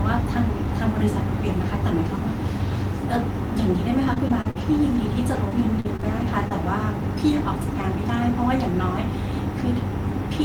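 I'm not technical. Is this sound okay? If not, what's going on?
No. From about 4.13 to 6.52 seconds the speech turns choppy: repeated packet loss (robotic sound). Pieces of the audio went missing again and again in quick succession, each gap no longer than about 41 ms, and the system covered them by stretching the last bit of sound. That patching fills roughly a tenth of the stretch. Unlike a single dropout, which is one brief hole, this is a rapid string of small ones.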